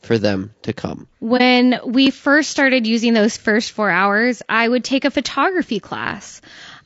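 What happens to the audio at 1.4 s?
Right around there, from 1.37 to 1.41 s, there's an AAC frame loss with muting. The sound briefly dips out for roughly 30 ms, which points to a single lost frame. The decoder zeroed that frame's spectrum, and the overlapping windows fade the audio out and back in across it, so it's a short, soft-edged dip.

Underneath that, the speech has plainly audible codec damage, likely from low-delay AAC compression (AAC-ELD, the video-call codec). The roughness and graininess, with noise filling in between harmonics, fit a bitrate around 32 kbps.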